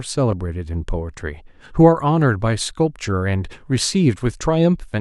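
A brief garbled stutter appears from 0.31 to 0.33 s. These are chunks out of order: one 10 ms chunk of speech landed a chunk late and plays after its successor, so nothing is lost but three hard joins result.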